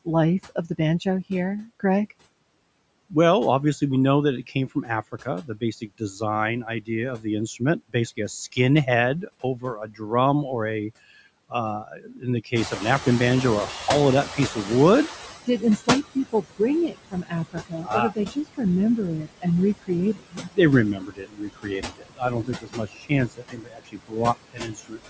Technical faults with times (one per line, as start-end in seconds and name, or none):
0.00-25.09 noise suppressor artifacts
0.05-2.12 speech cut by the noise suppressor
4.47-10.02 speech cut by the noise suppressor
11.50-12.82 speech cut by the noise suppressor
12.55-15.48 noise suppressor catching up
14.26-25.09 speech cut by the noise suppressor